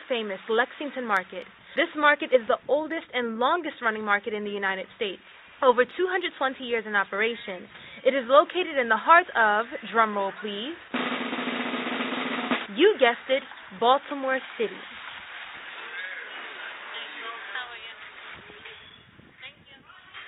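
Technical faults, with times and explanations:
No technical faults can be heard anywhere in the clip. Nothing in the audio calls for a time or an explanation.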